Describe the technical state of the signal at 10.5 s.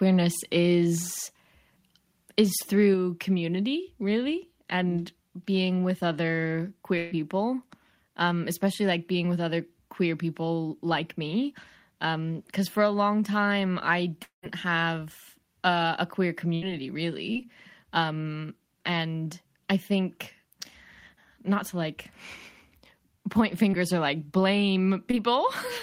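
At 10.5 s the speech signal is intact, with no dropout, clipping, glitch or other fault audible at that moment.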